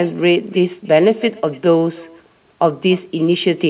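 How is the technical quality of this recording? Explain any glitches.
The recording has three problems: a faint echo, a sender clock running out of step with the receiver, and the small timing fixes this causes. The audio also shows nothing above 4 kHz.

Echo with no canceller: Throughout, the far end's loudspeaker feeds its microphone, so every phrase returns about 25 dB quieter roughly 300 ms later. On a spectrogram this shows as a faint, delayed ghost of each syllable.

Clock drift between sender and receiver: The sender's clock runs about 2 percent slow throughout, so the receiver's jitter buffer keeps draining. The waveform shows tiny irregular joins where it compensates.

Repeated timing corrections: From 0.17 to 3.66 s, the receiver stretches the audio to 98% speed, adding around 70 ms through uneven repeated fragments. This is heard, if at all, as slight hiccups, and a spectrogram shows small duplicated slivers.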